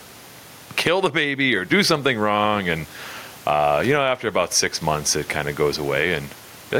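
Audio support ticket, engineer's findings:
Gain pumping, throughout the clip. The gain swings by around 15 dB, leaving loud and soft passages squashed together. The likely cause is input gain set far too high, with a fast limiter or compressor clamping every peak. It differs from the room noise, about 38 dB below the speech, because it comes from the level control rather than the room.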